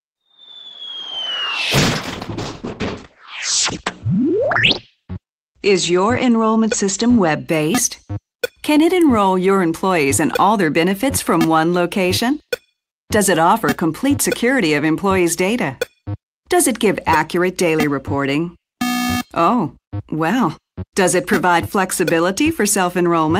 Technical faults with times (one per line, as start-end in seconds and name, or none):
1.78-7.53 call bitrate drop